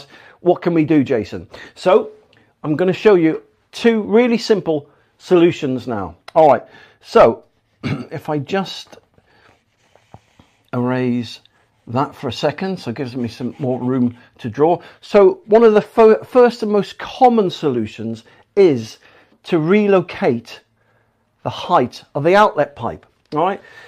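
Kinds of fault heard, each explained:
No kinds of fault are heard in this clip.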